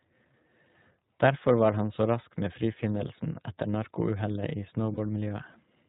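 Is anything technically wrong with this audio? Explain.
Yes. Throughout, the speech sounds band-limited, slightly rough and synthetic, with nothing above 4 kHz. That is plainly audible damage from the iLBC codec, a narrowband VoIP coder that encodes each frame's excitation independently. The quality fits its 15.2 kbps mode with 20 ms frames.

From 4.94 to 4.99 s there is a brief, held, faintly buzzy stretch lasting about 40 ms. These are lost iLBC frames, consistent with two missing packets. The decoder filled the gap by repeating the last pitch cycle mixed with noise, and the voice is right again almost at once afterwards.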